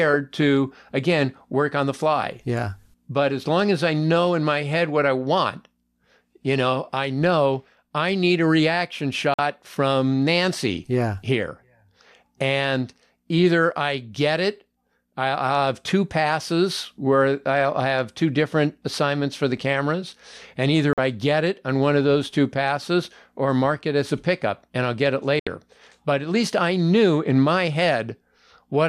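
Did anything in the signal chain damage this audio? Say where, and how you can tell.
Yes, digital broadcast dropout at reception: the receiver muted on failed frames at 9.34, 20.93 and 25.39 s, leaving 50-80 ms full-band blank gaps on the spectrogram.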